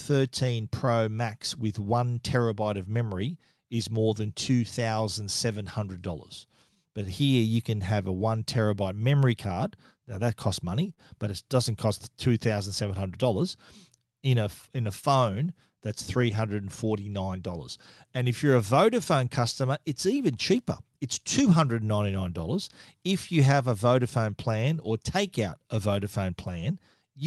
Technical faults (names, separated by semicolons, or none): clock drift between sender and receiver; repeated timing corrections; short stall from a late packet